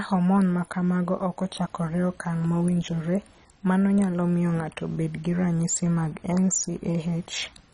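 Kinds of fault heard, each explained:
MP2 compression: The speech was likely passed through an MPEG Layer II encoder starved of bits, with a heavy squeeze that fits a rate of around 32 kbps. Short of bits, the encoder drops its upper sub-bands and coarsely quantises the ones it keeps. Throughout the clip nothing survives above 10.4 kHz, so the speech sounds dull, and the remaining bands carry a gurgling, granular roughness as they flicker in and out.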